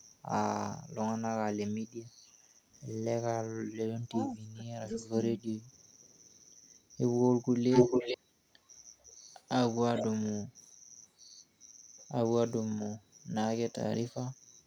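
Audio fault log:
3.95–5.25 s, speech suppressed in double talk: the speech dips in pieces, by about 25 dB at its deepest, for about 0.7 s in all. This is likely an echo canceller that could not tell near speech from loudspeaker echo while both sides talked, so it attenuated everything.
7.7–8.18 s and 9.95–10.04 s, echo leak: a copy of the speech returns 445 ms late, about 5 dB louder than the speech in the first span and about 5 dB quieter in the second. This is likely uncancelled loudspeaker pickup at the far end being sent back.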